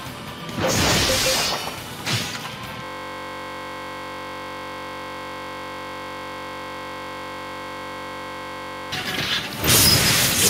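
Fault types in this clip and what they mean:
System hang loop: the machine or its audio driver stalled while the sound hardware kept replaying its ring buffer, so from 2.84 s to 8.92 s one 21.33 ms slice repeats exactly, fusing into a steady buzz at 46.9 Hz, which fits a 1024-sample buffer.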